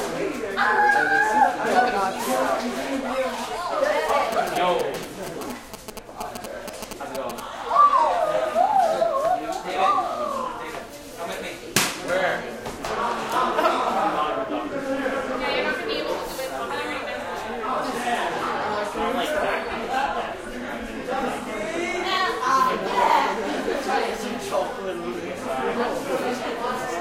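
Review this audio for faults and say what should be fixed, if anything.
GSM signalling bursts, 4.09 to 7.40 s: fairly loud galloping ticks and 217 Hz buzz, a nearby phone's radio rectified by the audio circuit. Keep phones away or in flight mode.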